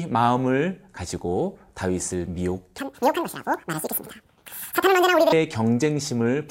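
Speech clip with a section at the wrong speed from 2.78 to 5.32 s, running 1.9 times too fast. Pitch rises about ten semitones along with the tempo, unlike a pitch shift or time-stretch, which alter only one. The likely cause is playback against a mismatched clock.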